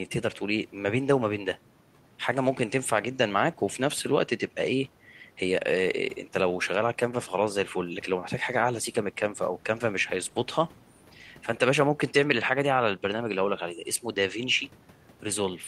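Nothing stood out as a technical fault on listening to the speech recording.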